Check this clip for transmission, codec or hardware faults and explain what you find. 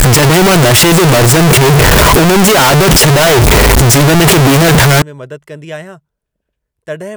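One fault is present. From 0.0 to 5.02 s, ending just before "में मदद", the speech turns into extremely loud, harsh distortion. The likely cause is signed and unsigned samples being mixed up, which fits 16-bit data. Flipping the top bit makes each zero crossing jump across the full range. Even quiet moments sound as loud as everything else.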